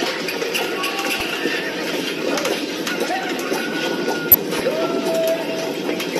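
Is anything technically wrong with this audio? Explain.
Yes. Damaged data in a compressed stream causes brief blips at 1.18–1.21 s and 4.31–4.35 s. Corrupted frames make the decoder lose sync and resynchronise.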